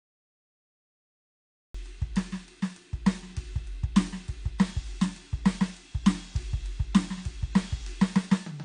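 For the first 1.74 s the clip is digital silence, and at 1.75 s the music cuts in already in progress. This cut-off start means capture began late, so there is no natural attack or fade-in, only an abrupt entry mid-sound.

Throughout, the music sounds dull and smeared, with nothing above 10 kHz and a warbly, fizzy texture on sustained material. The damage is plainly audible and is likely AAC compression, consistent with AAC-LC at around 32 kbps, where coarse quantisation lowers the bandwidth and thins the spectrum.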